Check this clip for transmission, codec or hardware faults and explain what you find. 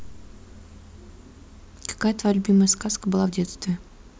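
Nothing in this bit of speech points to a problem with the transmission, the codec or the hardware, so there's nothing here to flag.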